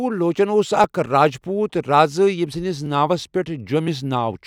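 From 0.84 s to 3.88 s the speech carries a regular click about every 1.01 s, roughly four in all. These are clock drift buffer slips, likely from two devices running on separate clocks that disagree by around 0.1 percent, so the buffer between them creeps until a block of around 50 samples is dropped or repeated. On a waveform each slip is a step discontinuity. On a spectrogram it shows as a thin vertical broadband line, evenly spaced across that stretch.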